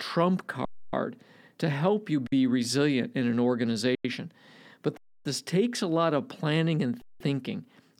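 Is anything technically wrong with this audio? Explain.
Yes. There are five underruns with held sample, at 0.65–0.93 s (279 ms), at 2.27–2.32 s (51 ms) between "to help you" and "resilient in an", at 3.95–4.05 s (93 ms) after "resilient in an", at 4.97–5.25 s (279 ms) before "this takes a lot", and at 7.02–7.20 s (186 ms). Each time the playback buffer emptied and the converter held its last value. The speech freezes into a flat, silent stretch and then resumes where it stopped, with no speech lost.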